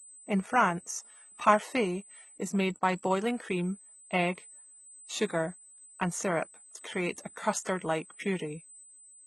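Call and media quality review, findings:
USB whine throughout: steady 8 kHz tone, roughly 20 dB below the speech. Probable component: USB audio interface, 125 µs microframe current draw leaking into power or ground. Fixed pitch, so bus timing, not acoustic.

Treble sounds gritty and metallic on s sounds throughout, nothing above 11.8 kHz. Likely HE-AAC compression at a low bitrate, around 16 kbps: top band rebuilt by copying lower bands up, so the harmonics don't line up. Heavy damage.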